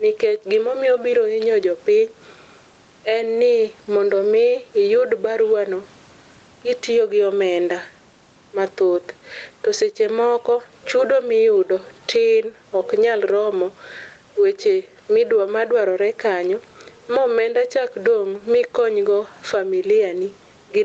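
Gain pumping runs through the whole speech clip. The room noise sits well below the speech, and the gain swings by roughly 15 dB. Loud and soft passages sound squashed together. Likely cause: input gain set far too high, with a fast limiter clamping down.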